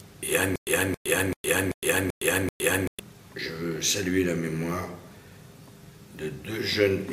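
Stutter with silent gaps runs from 0.56 s to 3.00 s. The same 273 ms burst of sound plays six times in a row, each followed by 113 ms of dead digital silence, so it returns at an even 386 ms pace. The playback likely stalled and, on each retry, replayed the last buffered fragment before running empty again. Whatever audio belonged in that stretch is lost, and the sound picks up again only once the stall clears.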